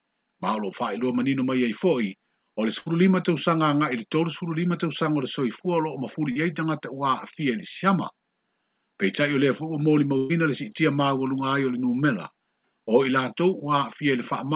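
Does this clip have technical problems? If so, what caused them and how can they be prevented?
Yes. There are two bursts of packet loss, at 2.80 to 2.88 s and 10.17 to 10.31 s, removing about 60 ms and 120 ms. At each, the receiver prolonged the last sound and faded it, then jumped ahead. On a spectrogram this shows as smeared, repeated bands decaying into a hard seam. Better network capacity, forward error correction or a deeper jitter buffer would help prevent it.

A short concealed packet loss at 6.32 to 6.37 s removed about 40 ms, and the receiver filled it with extrapolated sound before blending back. It is heard as a brief smear or wobble. A waveform shows a slightly too-regular stretch with a soft join, and a spectrogram shows a blurred sliver. Redundant packet coding or steadier network timing would prevent it.

The call path itself adds no fault here. Nothing appears above 4 kHz, which fits a narrowband G.711-style codec.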